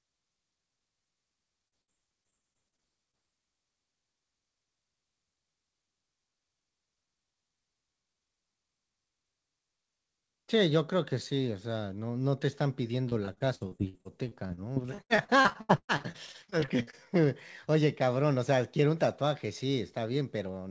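Speech with repeated packet loss (robotic sound) from 1.68 to 3.15 s and again, more heavily, from 13.09 to 16.95 s. Each missing piece, up to 116 ms in the second stretch, is patched by prolonging the last sound. The result is a choppy chatter of closely spaced holes, not a single clean dropout. The call codec passes nothing above 8 kHz.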